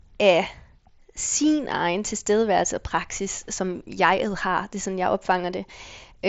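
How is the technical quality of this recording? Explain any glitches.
No glitches here: the speech comes through a Bluetooth mSBC headset link, which keeps it to a wideband 8 kHz top end, and nothing in the recording stumbles or breaks up.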